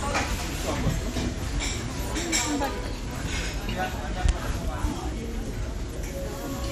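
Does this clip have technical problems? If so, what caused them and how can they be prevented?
Yes. The whole clip has the dull, gurgling, granular texture of MP2 compression. Nothing is heard above 15 kHz. Upper bands seem to flicker in and out, and what remains sounds coarsely quantised. The likely cause is MPEG Layer II coding starved of bits, which fits a low rate around 64 kbps. To prevent it, encode at a higher bitrate or use a more efficient codec.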